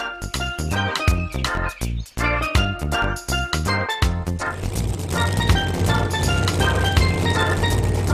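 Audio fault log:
0.88 s, bit error spike: a single sample jumps to about -31 dBFS and snaps back, giving one sharp broadband tick unrelated to the surrounding sound, from one flipped bit.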